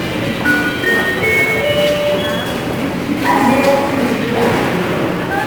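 From start to finish, a grainy hiss rides on top of the sounds, thickening on loud and bright passages and easing on quieter ones. That behaviour is the signature of sample clock jitter. The converter's timing wanders by something on the order of 10 microseconds, so each sample lands a little early or late. Where the waveform changes fastest, that timing slip becomes a level error, here sitting only about 20 dB beneath the signal.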